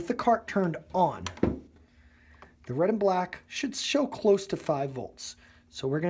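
No technical faults can be heard anywhere in this clip.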